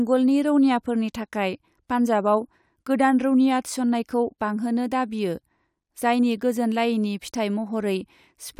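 The speech signal stays intact for its whole duration, with no audible technical faults at any point.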